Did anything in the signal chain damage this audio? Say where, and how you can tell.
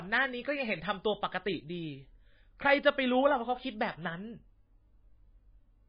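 Yes, MP3 compression throughout, at the codec stage: nothing above 5 kHz and a heavy watery swirl as weak lines drop out, likely from a bitrate near 17 kbps.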